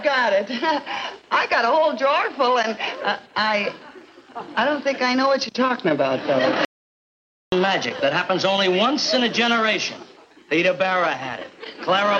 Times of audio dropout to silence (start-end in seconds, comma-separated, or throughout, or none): 6.65-7.52